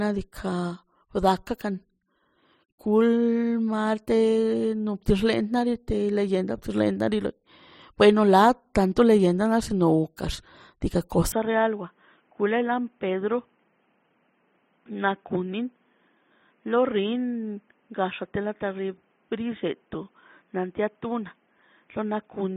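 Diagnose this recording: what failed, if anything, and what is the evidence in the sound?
Input switched to a poorer device at 11.32 s: with no gap, the speech turns dull and boxy, with nothing above 3.6 kHz, a level drop of about 5 dB and new noise roughly 40 dB down, likely the driver rerouting capture to a narrower-band microphone.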